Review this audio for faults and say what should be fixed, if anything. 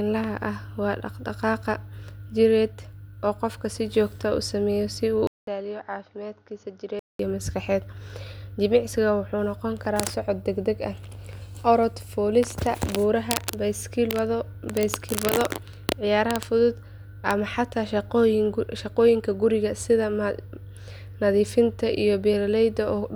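From 5.27 s to 7.19 s, just before "iyo maskaxeed", the speech turns dull and drops about 10 dB in level after a 200 ms gap, with a faint new noise floor well below it. The likely cause is an input switched to a poorer device, whose narrower band removes everything above 6.8 kHz. A spectrogram shows a flat ceiling at 6.8 kHz and a blank column at the switch, and the waveform visibly shrinks. To prevent it, lock the recording input and disable automatic device or headset-profile switching.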